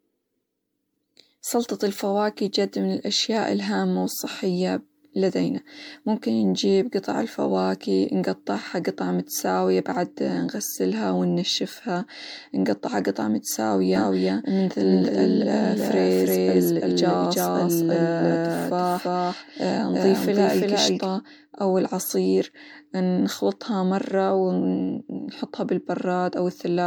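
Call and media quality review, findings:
Generation loss, throughout: speech likely re-encoded through MP3 about seven times, fitting a 96 kbit/s chain; fresh quantisation each pass gives swirly, hollow, smeared sound, blurred onsets, nothing above 19.9 kHz.

Doubled audio track, 13.96 to 21.06 s: likely a second, slower capture path or misaligned edit; an equal-level dry copy trails by roughly 300 ms, starting and stopping abruptly, starting just before "أو العصير نخلطها مرة".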